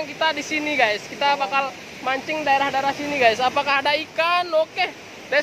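Nothing in the audio points to a technical fault. No dropout, distortion or other defect can be heard anywhere in it.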